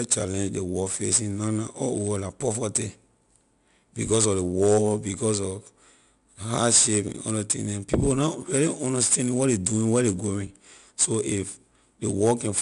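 From start to finish, the speech carries 4-bit ADPCM compression. Each sample is coded as a coarse step from a prediction. The resulting hiss rises with the louder syllables. Sharp attacks turn gritty. Nothing sounds above 10.6 kHz, which fits about 89 kbps.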